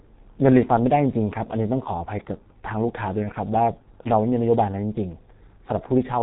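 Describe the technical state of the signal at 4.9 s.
At 4.9 s the speech carries heavy G.723.1 codec damage, present throughout the clip. The slowly updated 30 ms voice model, consistent with roughly 6 kbit/s, leaves it muffled and hoarse with smeared consonants. A spectrogram shows an empty band above 3.8 kHz and blurred, coarsely stepped harmonics.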